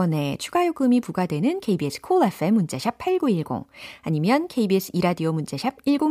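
No technical faults turn up anywhere in this speech recording, with the signal holding steady from its opening moment to its close.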